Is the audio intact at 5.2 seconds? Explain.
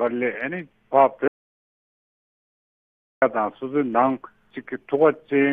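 Yes, the audio is intact at 5.2 seconds, with no fault audible at that moment.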